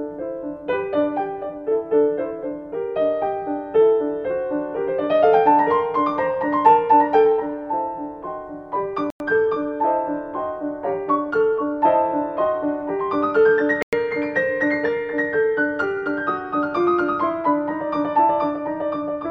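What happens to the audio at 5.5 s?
Nothing goes wrong at 5.5 s; the audio carries straight through that moment with no dropout, glitch or other fault.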